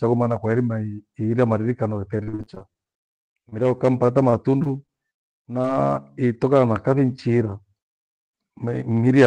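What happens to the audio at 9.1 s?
Nothing goes wrong at 9.1 s: the speech there runs on intact, with no dropout, glitch or distortion, only the steady band-limited character of the call path that carries it.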